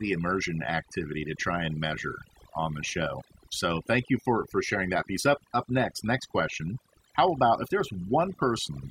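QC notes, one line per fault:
Throughout: overdone noise removal. The noise reduction was set too aggressive, gating individual frequency bands whenever they dip near the noise estimate. Pauses fall to near silence with twinkling specks. On a spectrogram the background shows as scattered isolated dots, with holes torn out of quieter speech detail.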